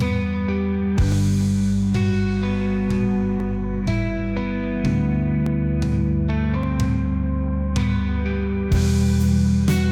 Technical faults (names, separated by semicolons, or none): dropped samples